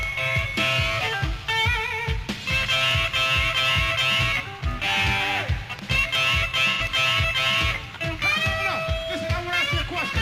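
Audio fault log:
6.71–6.81 s, AAC frame loss with concealment: about 85 ms smears into a noisy, phasey patch as the decoder patches over what fits two lost frames.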